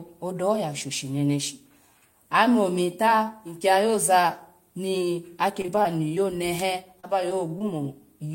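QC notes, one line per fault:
5.61–6.18 s: repeated packet loss (robotic sound). Several short gaps, up to 26 ms, are each patched by stretching the preceding sound, giving choppy speech.
7.00–7.62 s: repeated packet loss (robotic sound). Fewer holes, the longest 29 ms, are again filled by repeating prior sound, so the speech turns briefly choppy and broken.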